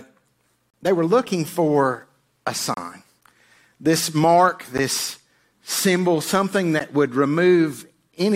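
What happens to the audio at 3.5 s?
Nothing goes wrong at 3.5 s: the speech runs through that moment intact, with no dropout, click or distortion to be heard.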